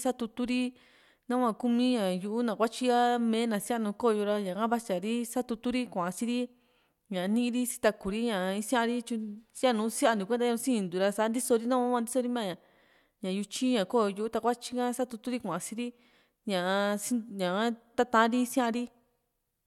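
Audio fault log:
No faults are audible anywhere in this speech.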